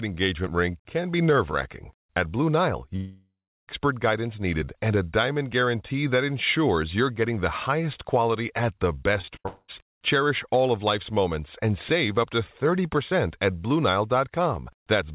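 At 2.96 s a long network dropout begins. It lasts until 3.70 s, just before "guidance needed and a". About 0.72 s of audio never arrives. The last sound is stretched into a buzzy tail that fades. About 0.34 s of near-silence follows. The cause is likely a stall in packet delivery. The audio then resumes without the lost part.

From 9.21 s to 9.46 s, after "highest quality at the", there is repeated packet loss with robotic sound. Four short holes appear, the longest 57 ms. Concealment covers about 44% of this stretch. Each hole is patched by repeating the last sound. The result is choppy, with pieces missing.

A second long network dropout follows directly, from 9.46 s to 9.70 s. About 0.22 s is missing. Almost all of it is filled with a fading continuation. Only about 10 ms goes silent. A brief network stall is the likely cause.

Throughout, the narrowband call path leaves nothing above 4 kHz.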